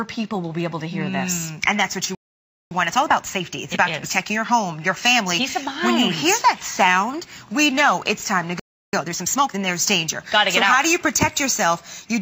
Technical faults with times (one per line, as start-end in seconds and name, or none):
2.15-2.71 playback stall
2.71-5.71 time-compressed catch-up
8.59-8.93 playback stall
8.93-9.59 time-compressed catch-up